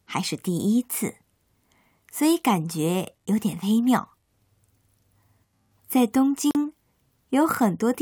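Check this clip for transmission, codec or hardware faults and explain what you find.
One fault stands out in the speech: a gap at a join of encoded pieces, from 6.51 to 6.55 s. Two separately encoded segments were butted together untrimmed, so encoder start delay and final-frame padding leave a 41 ms silence. It sounds like a brief dropout. On a waveform or spectrogram it appears as a blank strip with smeared edges, with the speech then resuming where it stopped.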